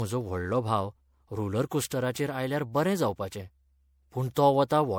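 Right from the start and all the way through, the speech has a swirly, hollow quality with smeared consonant attacks, more than a single lossy encode would cause. That's likely generation loss: the audio seems to have gone through MP3 about four times, each pass re-quantising on a shifted frame grid so the noise and spectral holes pile up. The damage fits a 96 kbit/s MP3 chain, and nothing survives above 20.9 kHz.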